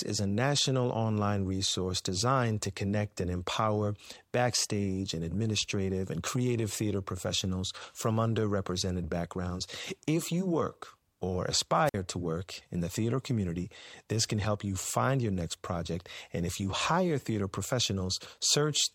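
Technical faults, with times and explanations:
11.85 to 11.94 s, wireless microphone squelch dropout: just after "you work or" the sound breaks briefly, with a short swell of hiss as the radio link from the FM transmitter weakens, then a mute of about 52 ms where the receiver's squelch shuts the output off because the carrier has fallen below its threshold. Once the signal recovers, the squelch reopens and the sound resumes at "to work in the".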